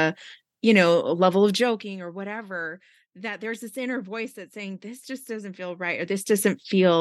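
Nothing technical goes wrong anywhere in this bit of speech, so there's nothing to flag.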